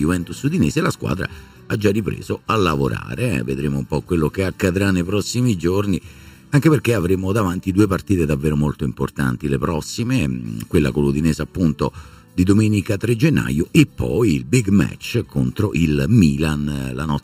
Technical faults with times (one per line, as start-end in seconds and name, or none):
0.00-17.24 channel delay (comb filtering)